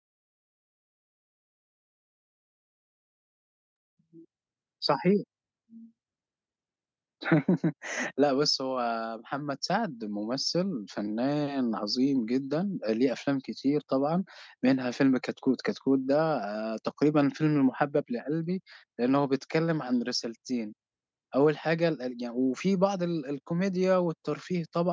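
A speech recording that has been through a call's microphone processing, with nothing technically wrong with it.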